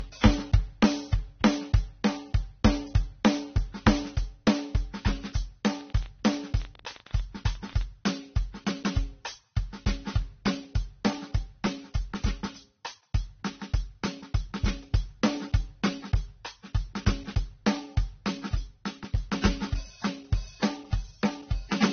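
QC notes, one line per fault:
Throughout: transcoding between lossy codecs. The music has nothing above 6.3 kHz, and its artefacts come in two layered textures rather than one codec's consistent signature. This likely comes from a low-rate AAC-LC encode, around 24 kbit/s, re-encoded to Vorbis at around 32 kbit/s. The second codec spends bits re-coding the first one's damage and adds its own, while the lowest cut-off in the chain remains. That mixed artefact texture sets it apart from a single low-bitrate encode.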